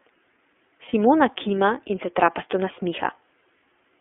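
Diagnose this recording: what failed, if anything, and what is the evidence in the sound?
Across the whole clip the speech sounds narrowband and slightly rough and synthetic, with nothing above about 3.4 kHz and little below 300 Hz. The damage is plainly audible. This is the iLBC codec at the codec stage, coding each 30 ms frame independently, which fits its 13.33 kbps mode.

At 0.89 s the speech briefly turns into a held, faintly buzzy vowel for about 30 ms, then returns cleanly by 0.94 s. This is a lost iLBC frame on the network path: one packet went missing, and the decoder filled the gap by repeating the last pitch cycle with added noise.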